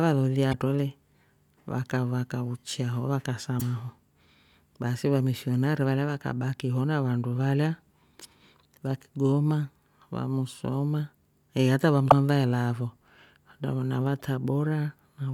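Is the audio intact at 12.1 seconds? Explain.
No. Right after "musoma eeh hata va", from 12.06 to 12.12 s, damaged data in the compressed stream makes the decoder misread corrupted frames and lose sync until it finds the next valid header. The result is a brief chirp, squawk, click or short hole.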